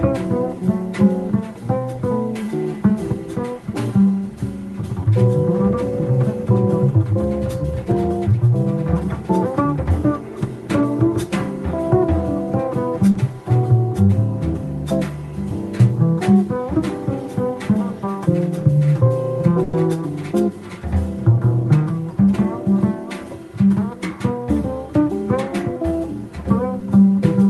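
Short concealed packet loss occurs at 13.11 to 13.17 s and again at 26.79 to 26.83 s in this audio, which has passed through a call codec whose top end stops near 12 kHz. In each case a few hundredths of a second failed to reach the decoder in time: about 40 ms at the first point and 20 ms at the second. The receiver bridged the hole by extending the preceding sound and then blending back into the real signal, so each spot comes across as a brief smear or wobble.

A burst of packet loss hits at 19.63 to 19.75 s, where roughly 100 ms went missing in one run. Rather than dropping to silence, the receiver kept the last sound going and let it decay across the gap, which is heard as a held buzz or fading hiss. The audio then picks up further along, with that tenth of a second simply absent.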